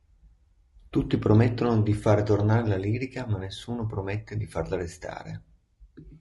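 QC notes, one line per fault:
Throughout, low-delay AAC compression: the speech sounds rough and grainy from start to end, with a hiss-like fill between the pitch harmonics and a dulled, artificial top band, likely from AAC-ELD at a rate that fits about 32 kbps. Its short frames resolve harmonics poorly. On a spectrogram the harmonic stripes look smeared with noise packed between them, and the upper band appears thin and patchy rather than continuous.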